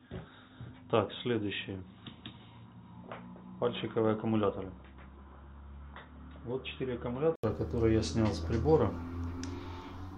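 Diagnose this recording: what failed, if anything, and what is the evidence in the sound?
From the start until 7.44 s the sound is dull and boxy, with nothing above 3.8 kHz, a level about 5 dB lower, and its own faint background noise sitting well below the signal. An 80 ms gap follows, and then the full bandwidth and level return. At the driver stage, the likely cause is an input switched to a poorer device: the system recorded through a narrower-band input, then rerouted to the proper one, with a short silence during the handover.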